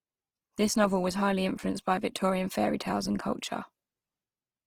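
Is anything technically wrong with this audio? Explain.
Yes. Throughout the speech, the audio has likely been through Opus compression in its CELT music mode at a low rate, which fits about 16 kbps. Starved bands are refilled by folding or noise, so the full-band speech turns plainly grainy, rough and noisy.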